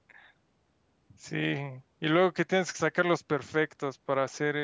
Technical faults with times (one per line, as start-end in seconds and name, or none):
none